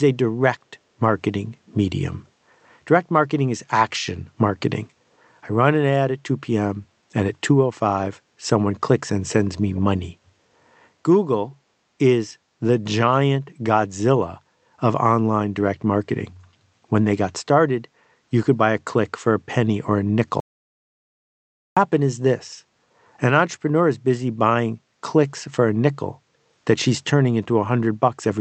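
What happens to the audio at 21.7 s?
The input likely dropped, leaving silence: an audio dropout to silence from 20.40 to 21.77 s, so 21.7 s is dead silence just before speech resumes.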